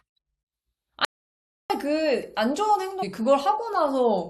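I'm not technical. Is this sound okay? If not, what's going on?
No, it has two problems. The first is an audio dropout to silence. From 1.05 to 1.70 seconds the speech stops dead. For about 0.65 seconds there is total silence, with no background hiss or room sound at all. Then the speech comes back mid-flow. The likely cause is that the sound input was briefly lost, from a loose connection or an accidental mute, while recording carried on. Whatever was said in that gap is gone.

The second problem is a stream segment skipped, at 3.02 seconds. Here the speech suddenly jumps forward with a tiny blip. It doesn't pause. It just leaps ahead, as if a piece was cut out. This likely happened because the audio was delivered in small chunks and one chunk failed to arrive. The player moved straight on to the next chunk, so a short stretch of speech is missing.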